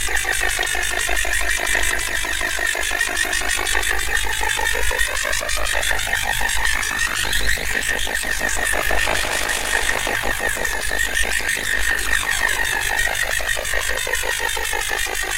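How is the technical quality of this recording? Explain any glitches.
Not great: there's one problem, and it runs through the whole recording. Overlap-add ripple is present from start to finish. The audio was split into windowed frames and rejoined with an overlap that doesn't sum evenly, so the level dips and swells by about 11 dB around 50 times a second. You hear it as a rough, buzzy flutter, almost a robotic tremolo, riding on everything.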